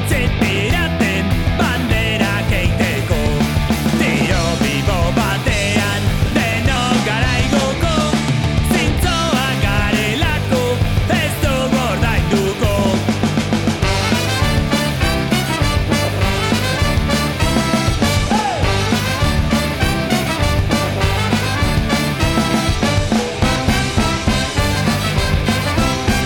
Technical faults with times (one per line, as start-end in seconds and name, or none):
4.68 dropped buffer (overrun)
6.76 dropped buffer (overrun)
23.56 dropped buffer (overrun)